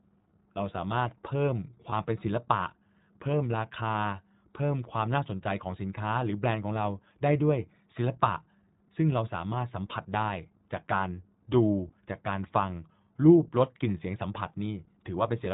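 Throughout, the sound carries iLBC codec damage: a narrowband VoIP coder that encodes each frame's excitation independently, discarding everything above 4 kHz. The speech is dull and plainly rough and synthetic in texture, which fits the 15.2 kbps mode with 20 ms frames.

Lost iLBC frames occur from 1.90 to 1.93 s and from 9.88 to 9.93 s. Each gap fits a single missing 20 ms frame, concealed by repeating the last pitch cycle mixed with noise. It is heard as a brief held, buzzy vowel, with clean recovery immediately after.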